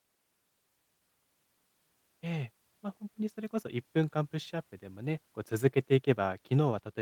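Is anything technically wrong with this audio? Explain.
No, nothing in this speech recording points to a technical problem. There is nothing here that needs correcting.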